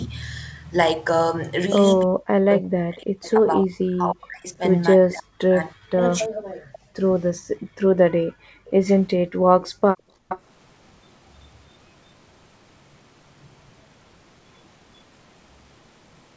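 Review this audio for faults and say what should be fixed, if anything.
Between 2.03 and 6.37 s, speech is suppressed in double talk, likely because the echo canceller could not tell the near talker from loudspeaker echo while both sides spoke. The voice dips by up to roughly 40 dB, losing around three seconds in pieces. Tuning the double-talk detector to keep near-end speech when both sides are active would prevent this.

Echo leak puts a delayed copy of the far voice back into the call at 3.25, 4.47, 6.72, 8.86, 9.63 and 10.29 s. The loudspeaker side's canceller likely left residual echo. The delay drifts from 342 to 373 ms, and the echo sits about 25 to 30 dB down, rising to about 10 dB down at 10.29 s. Letting the canceller track the drifting delay would prevent this.

Background is gated by the echo canceller between 6.65 and 10.29 s. Its suppressor clamped the microphone hard while the loudspeaker played, so the room sound drops by about 40 dB for roughly two seconds in total, then returns. 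Easing the suppressor and adding comfort noise would prevent this.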